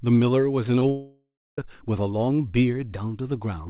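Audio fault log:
0.80–0.82 s and 0.89–0.91 s, short concealed packet loss: two tiny gaps of about 10 ms each where packets arrived too late, so the decoder stretched the previous sound and blended back. You hear a brief smear or wobble each time, over a telephone-band sound with nothing above 4 kHz.
0.91–1.58 s, long network dropout: the audio just stops arriving for about 0.67 s. At first the receiver keeps extending the last sound as a fading buzz, then the last third of a second or so goes quiet before the audio picks up again with that stretch missing. The likely cause is a network stall.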